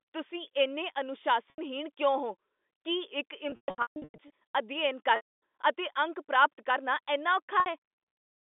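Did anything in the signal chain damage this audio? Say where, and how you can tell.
Yes, at the network stage: packet loss with pitch repetition at 1.5–1.58 s, 3.5–4.3 s, 5.16–5.39 s and 7.6–7.66 s. The 80 ms and 60 ms gaps sound like a briefly held, buzzy tone as the receiver repeats the last pitch period. The 260 ms gap, and the 3.5–4.3 s stretch losing 540 ms in runs up to 140 ms, fade toward silence before speech cross-fades back. The gap sizes fit 20 ms packets.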